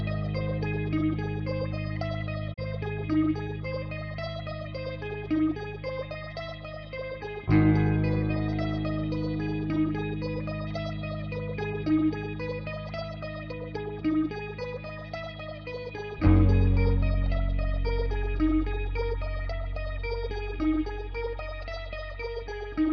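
At 2.52 s the sound briefly falls away, fading out over about 20 ms into a short silent gap before picking up again by 2.60 s. This is a digital broadcast dropout: the receiver stopped getting decodable frames, muted its output, and resumed once valid frames arrived. About 32 ms of programme is simply missing rather than delayed, a span that fits the loss of a single frame.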